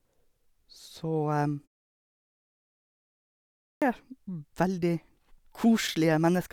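At 3.74 s, after about 2.2 s of silence, speech comes back abruptly, with its opening sounds missing until about 3.82 s. Roughly 77 ms of the onset is simply gone. This is a clipped start after a pause: the output device went to sleep during the long silence and needed time to wake, so the first part of the returning speech was swallowed.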